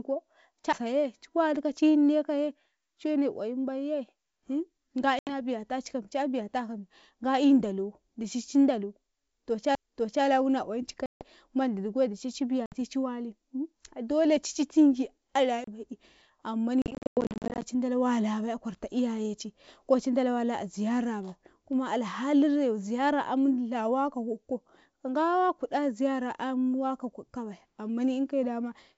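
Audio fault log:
0.73 s, 9.75 s, 15.64 to 15.67 s: CD skip. Right after "ko cu" and again between "ndalo dici ci dalo" and "wuna oyim ci", a brief tick cuts the sound, and it resumes from a different point. The third skip mutes for a few tens of milliseconds, the first two for only a few. A knock or surface flaw threw the laser onto another turn of the disc spiral, so playback briefly muted and then continued from the wrong place on the track.
5.19 to 5.33 s, 11.06 to 11.25 s, 12.66 to 12.75 s, 16.82 to 17.65 s: packet loss on an ADPCM call. There are hard-edged silent holes of 80, 150 and 60 ms, the second between "wuna oyim ci" and "mbandi dicai". The last stretch breaks up repeatedly, losing 460 ms across 800 ms, with the longest gap 100 ms. Silence replaced the missing packets, and the decoder's adaptive predictor and step size drifted from the sender's. Speech therefore returns slightly distorted, which settles within tens of milliseconds, over a clean G.722 wideband line.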